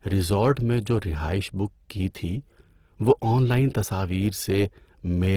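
A speech clip likely passed through low-rate Opus compression in its music mode, consistent with about 16 kbps. The whole recording sounds rough, grainy and noisy, despite content extending to 20.2 kHz.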